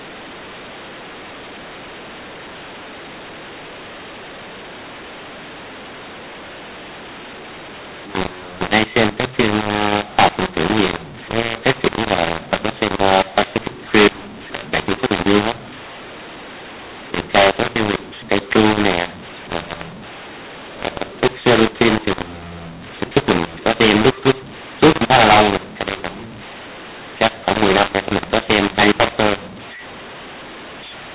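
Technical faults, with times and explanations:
Throughout, mu-law and A-law mixed up: speech coded as A-law is decoded as mu-law, scrambling levels, so it sounds harsh and distorted and pauses fill with noise.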